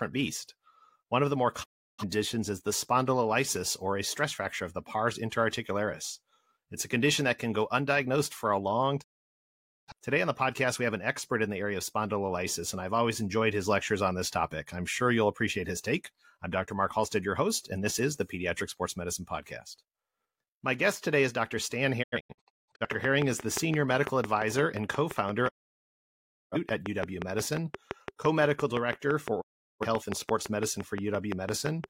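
Digital broadcast dropout at 1.62 to 2.04 s, between "of the more" and "is the spondylolysis or", and again at 9.00 to 9.92 s after "undiagnosed for a long". The receiver stopped getting usable frames and muted, each time with a 20 ms fade, and the speech sent during that gap is lost. At 22.02 to 22.86 s the same fault breaks into several short holes, the longest 0.17 s.

A train of clicks runs from 23.05 to 31.85 s. These are regular ticks at 5.8 per second, about fifty in all, peaking around 15 dB above the speech and audible in pauses too. They are likely interference from nearby equipment or a faulty connection or power supply injecting the same pulse repeatedly.

Over those clicks, the digital broadcast dropout returns at 25.47 to 26.57 s and at 29.40 to 29.86 s, with the same quick fades.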